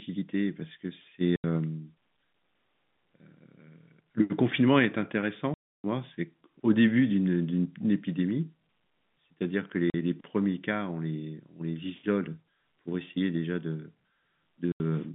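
At 1.36 s the speech drops out for 80 ms, then again at 5.54 s for a much longer 300 ms, at 9.9 s for 40 ms, and at 14.72 s for another 80 ms. That's packet loss filled with silence. Chunks of the stream never arrived, and the receiver just played nothing in their place. Every gap is a multiple of 20 ms, which fits 20 ms packets. The edges are abrupt, so each hole starts and stops hard.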